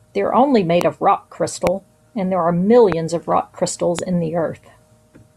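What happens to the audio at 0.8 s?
A sudden voltage step, likely from a plug, switch, static discharge or driver glitch, enters the signal path at 0.81 s and lasts until 0.83 s. The circuits downstream shape that step into a brief pulse, so the listener hears a single loud pop, roughly 15 dB above the speech, punching sharply through the audio for about 20 ms while the talking continues underneath without a break.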